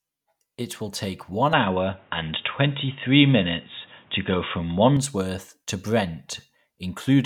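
At 1.53 s the speech abruptly turns dull and boxy, with nothing above 3.8 kHz, a level shift of roughly 5 dB and a faint new background hiss well below the voice. There is no gap at the change. At 4.97 s the full, clear sound returns just as suddenly. The pattern points to an input switched to a poorer device, likely a narrower-band microphone or a headset's call profile taking over mid-recording and then handing back.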